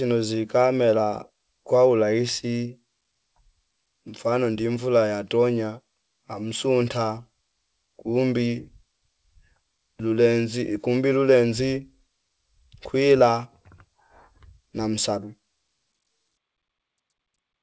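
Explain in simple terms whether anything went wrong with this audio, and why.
Nothing went wrong here.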